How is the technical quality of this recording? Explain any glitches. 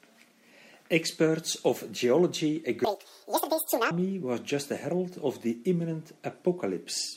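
The speech has one clear glitch: a section at the wrong speed. From 2.85 to 3.91 s, playback runs at 1.97 times normal, so pitch and tempo jump together, roughly ten semitones higher and hurried. The likely cause is that stretch being clocked at the wrong rate during editing or playback.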